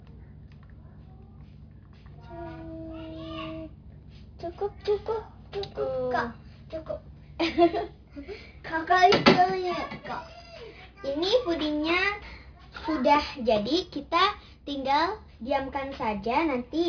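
Aliasing runs through the whole clip. The sound was resampled down without an anti-alias filter, which fits a drop to 11 kHz sampling. Content above the 5.5 kHz fold point reflects back as false tones, roughly 20 dB below the signal. High detail turns gritty and metallic.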